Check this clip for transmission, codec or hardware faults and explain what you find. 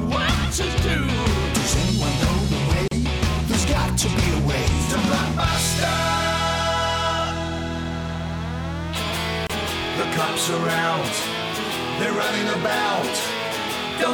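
Two gaps at a join of encoded pieces turn up, at 2.88 s and 9.47 s. The first gap spans about 35 ms, the second about 27 ms. The audio was encoded in separate pieces and then joined untrimmed. Each piece kept its encoder's leading delay and the padding on its final frame, so silence sits at each seam. You hear a brief dropout with smeared edges. Then the sound resumes exactly where it stopped.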